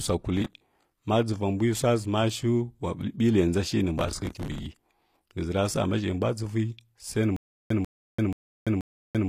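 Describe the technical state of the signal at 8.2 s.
At 8.2 s the signal is inside a stutter with silent gaps that runs from 7.36 s to the end of the clip. A 142 ms fragment of speech plays, then about 339 ms of digital silence follows, and the cycle repeats every 481 ms, four repeats in all. The likely cause is a player or stream stall: each retry replays the last buffered fragment and then runs dry, so the speech that belonged in those gaps is gone.

Under this, and across the whole clip, there is HE-AAC compression. The sound likely comes from an HE-AAC encoder at a low bitrate, consistent with about 24 kbps. Only the lower band is actually coded. The treble is rebuilt by copying lower bands upward, so s sounds come out gritty and metallic, the damage is plainly audible, and nothing reaches above 15 kHz.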